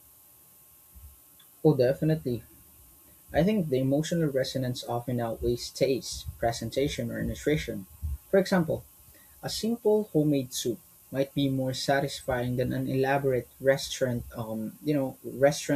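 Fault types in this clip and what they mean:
Low bit depth with noise shaping: The speech is stored with very few levels, which fits an 8-bit signal. The rounding error is pushed up in frequency. It sounds like a steady, thin hiss, strongest at the top, only about 20 dB below the speech.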